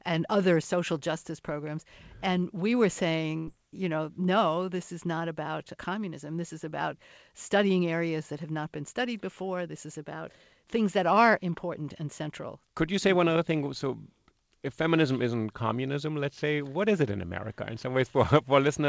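At 3.38 to 3.49 s, just after "we were", a burst of packet loss means about 100 ms of audio never arrived, so the receiver stretches the last sound into a fading tail. It then jumps ahead to "you know no this", with the gap lost.

At 13.33 to 13.37 s, right after "you say one", short concealed packet loss drops about 20 ms, and the synthesized fill leaves a brief smear before the real audio blends back in.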